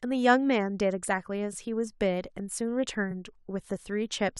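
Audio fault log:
1.52–1.54 s and 3.10–3.12 s, repeated frames: each time, a 23.2 ms chunk of the speech plays twice in a row, which fits a single compressed frame being written or sent again. You hear a tiny stutter, and each repeat stretches the clip by 23.2 ms.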